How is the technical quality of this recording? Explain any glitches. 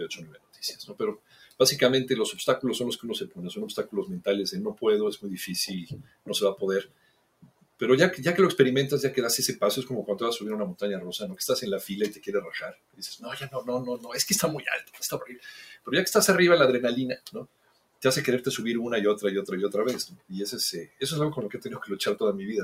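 The recording has been run through a speech-style noise suppressor, and it shows. Throughout the clip there's a noise suppressor applied to music or sounds, which is the wrong tool here. It treats steady tones, ambience and reverb as if they were background hiss and turns them down. So the level swings by something like 15 dB as the processing grabs and lets go, giving a pumping, fluttery, slightly hollow feel. Sharp onsets survive better than anything sustained.

On top of that there are specific spots of sound cut by the noise suppressor: 0.13–1.6 s, 3.28–7.81 s, 12.11–15.89 s, 17.16–18.04 s and 20.08–21.93 s. In each stretch the suppressor decided the material was noise and pulled it down harder than its surroundings, by about 20 dB at the deepest (about 19 dB in the last one). Not the whole window is hit, more like a second or two in the longer ones and well under a second in the shorter ones. 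You hear held sound sinking away and tails getting chopped short.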